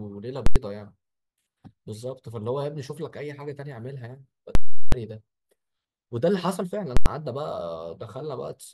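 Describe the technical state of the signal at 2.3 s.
At 2.3 s the speech signal is intact, with no technical fault present at that moment.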